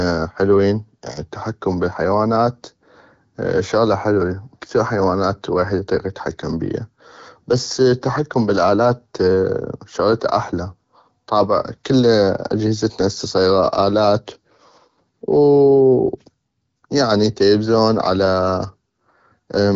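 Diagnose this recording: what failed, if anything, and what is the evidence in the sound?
Nothing failed in this recording, and the sound holds no evidence of a fault.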